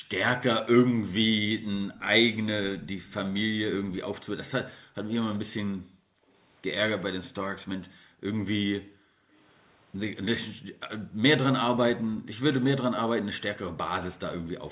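The room sound behind the speech drops out from 0.00 to 0.09 s, falling by about 40 dB. This is background gated by the echo canceller. While the far end played through a loudspeaker, the canceller pulled the microphone down hard, then released it.

From 1.95 to 3.13 s a faint delayed copy of the speech trails the original by 388 ms, about 25 dB below it. This is an echo leak, likely from a loudspeaker whose echo canceller let part of the pickup back into the call.

The same gating returns from 4.83 to 6.29 s, with gaps adding up to roughly 0.7 s. The leak comes back from 5.22 to 7.03 s, again at 388 ms, now about 30 dB down. More gating follows from 7.89 to 9.34 s, roughly a second in all, and from 10.51 to 11.18 s, about half a second. Each dip reaches about 40 dB. The narrow band, with nothing above 4 kHz, fits a G.711 mu-law call codec at 64 kbps.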